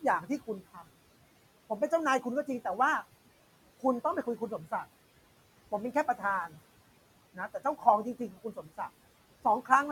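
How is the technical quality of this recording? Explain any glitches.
The technical quality is held back by an aggressive noise suppressor, which leaves audible processing throughout and twice swallows parts of the speech.

Noise suppressor artifacts run through the whole recording. The suppressor estimates the steady background frame by frame and pulls those bands down by about 17 dB. The room noise, which sits about 19 dB below the speech, sinks between phrases and reappears beneath each one.

Speech cut by the noise suppressor occurs at 4.23–4.72 s and again at 8.19–8.79 s. At these points the suppressor mistakes quiet speech energy for noise and attenuates it along with the background, by up to about 10 dB in the first case and about 13 dB in the second. Roughly a tenth of a second is affected in the first stretch and about a fifth of a second in the second. Soft consonants or word endings there sound faint or swallowed.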